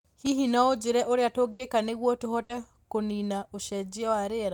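Bursts of packet loss at 1.51 to 1.61 s and 2.43 to 2.51 s: the last sound is held and faded for 80 and 60 ms, then speech resumes with audio missing.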